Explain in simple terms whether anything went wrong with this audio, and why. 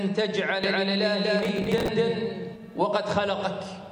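Two things go wrong. From 0.64 s to 2.56 s there is a doubled audio track: a second, equally loud copy of the sound runs about a fifth of a second behind. It starts and stops abruptly, with no fade or room echo. The likely cause is the sound being captured twice, once through a slower path.

From 1.39 s to 1.88 s there is processor overload crackle, a gritty tearing over the sound. The computer fell behind and repeatedly missed its deadlines, around twenty times. Each miss replayed a short scrap of old audio, which fits buffers of about 5 ms.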